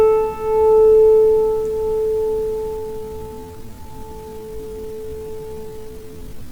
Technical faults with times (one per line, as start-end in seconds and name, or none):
2.75-6.52 time-stretched section